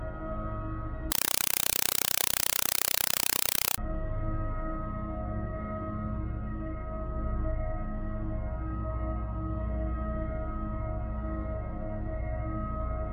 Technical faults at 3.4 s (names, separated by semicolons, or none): compressed stream played as audio